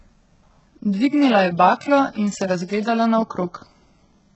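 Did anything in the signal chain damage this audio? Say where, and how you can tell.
Yes, at the codec: likely HE-AAC compression at a bitrate near 8 kbps. Throughout, treble is copied up from lower bands, stops at 8 kHz, and sounds gritty.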